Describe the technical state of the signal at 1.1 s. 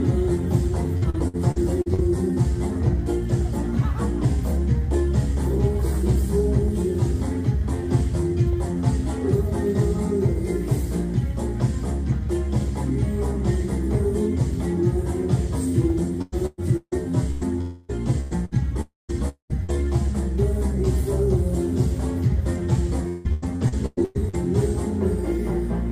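Choppy, robotic-sounding audio with small pieces dropping out, from 0.97 to 2.00 s: repeated packet loss. Six gaps, the longest 56 ms, were each patched by extending the preceding sound, so about a quarter of that stretch is concealment rather than real signal.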